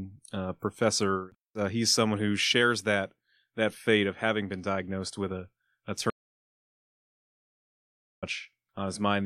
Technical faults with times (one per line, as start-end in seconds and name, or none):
6.10-8.22 audio dropout to silence